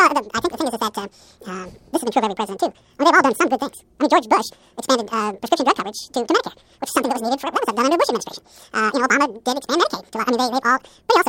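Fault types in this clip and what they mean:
Audio read two samples at a time (double speed): The playback treats each pair of samples as a single frame. The speech runs twice as fast and sits a full octave higher, 12 semitones up. This lasts the whole clip.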